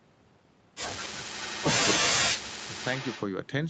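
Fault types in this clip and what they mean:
Echo leak: a faint copy of the speech arrives 248 ms late, about 10 to 15 dB down, in short scraps, likely from incomplete echo cancellation.
Speech suppressed in double talk: between 2.0 and 2.76 s the speech drops away sharply, roughly 40 dB at worst, likely from the canceller ducking overlapping talk.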